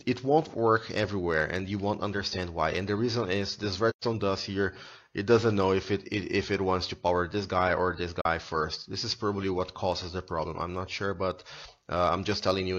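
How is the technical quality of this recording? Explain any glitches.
Two short dropouts break the audio. AAC frame loss with muting occurs at 3.90 to 4.04 s and again at 8.21 to 8.26 s. The decoder zeroed the missing spectrum, and the overlapping windows fade the sound down and back up. The first gap lasts 128 ms, consistent with three lost frames. The second lasts 42.7 ms, roughly one frame. The first sounds like a soft-edged hole and the second like a brief dip.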